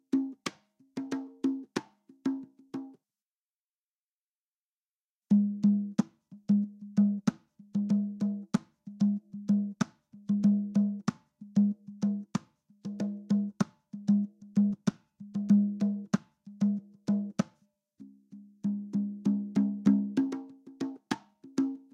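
No technical faults are audible.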